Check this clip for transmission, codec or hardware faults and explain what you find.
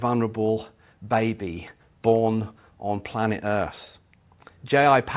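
No faults detected.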